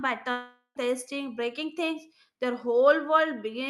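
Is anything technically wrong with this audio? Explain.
Yes. From 0.31 to 0.77 s there is a long network dropout, likely from packets failing to arrive. The receiver stretches the last sound into a fading buzz, leaving about 0.1 s of silence before the speech resumes with roughly 0.44 s missing. The audio around it carries the coding noise and 12 kHz top end of an Opus call path.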